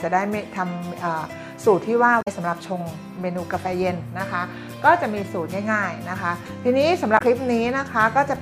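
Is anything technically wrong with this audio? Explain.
Yes, two short bursts of damaged data in a compressed stream, at 2.18–2.28 s and 7.15–7.21 s. Corrupted frames lose decoder sync, giving a brief glitch that shows as a vertical break on a spectrogram.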